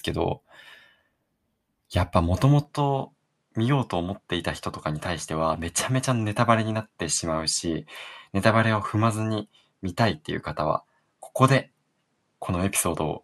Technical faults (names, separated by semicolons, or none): input switched to a poorer device